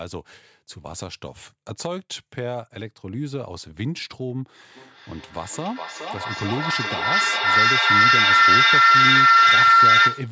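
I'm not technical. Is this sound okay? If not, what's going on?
No, from 4.76 s to the end there's a feedback howl. Two devices in the same room are on the call, so the sound loops from speaker to mic, getting louder each lap, into a shrill whistle around 1.5 kHz, with the sound coming back roughly every 0.4 seconds.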